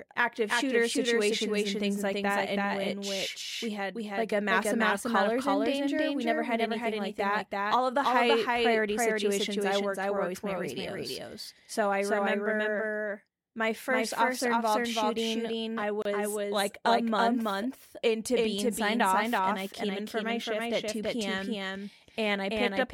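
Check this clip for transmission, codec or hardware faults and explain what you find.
Two faults show up: a doubled track running through the whole speech clip, and one short dropout at a join.

The doubled audio track runs from start to finish. A second full-band copy trails the original by around a third of a second at roughly equal level, likely from the same audio being captured again through a slower path. It has no reverb tail or room colouring. On a spectrogram every syllable's pattern repeats at that fixed offset, and the waveform shows each burst echoed in step.

The gap at a join of encoded pieces falls at 16.02 to 16.05 s, between "officer involved shooting I" and "like a month into". It is a 31 ms gap, left where separately encoded pieces were butted together with their encoder start delay and final-frame padding still in. The speech then resumes where it stopped. The waveform drops out with softened edges, and the spectrogram shows a thin vertical stripe across all frequencies.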